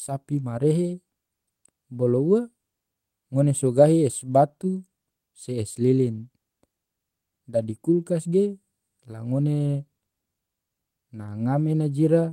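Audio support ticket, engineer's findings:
Lost packet rebuilt from error correction at 4.31 s and 5.43–5.45 s. Brief rough, noisy patch in the speech, with no gap. Each fits one lost 20 ms packet. The decoder played the low-bitrate copy carried in the next packet. Component: Opus in-band FEC.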